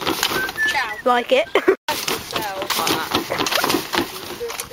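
From 0.59 to 2.91 s the audio shows crude rate conversion: nearest-sample repeats, fitting 44.1 kHz to 48 kHz, add an inharmonic fizz about 20 dB down that tracks loud, bright passages rather than clipping peaks.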